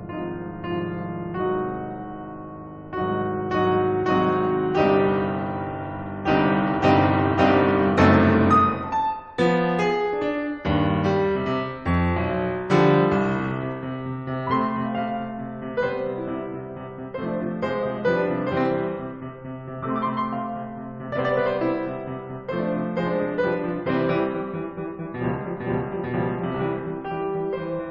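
No technical faults are audible.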